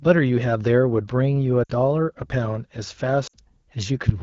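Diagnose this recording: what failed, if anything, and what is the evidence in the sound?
Lost AMR speech frames at 1.63 to 1.72 s and again at 3.27 to 3.36 s, a network-stage failure on the radio link. At each point the speech drops to near silence within two frames, then returns briefly weak or rough. Each gap spans about 60 ms, which fits three 20 ms frames failing their checksum. The decoder filled them by repeating the last good pitch and vocal tract settings with falling gain. The surrounding wideband sound points to AMR-WB at 12.65 kbit/s.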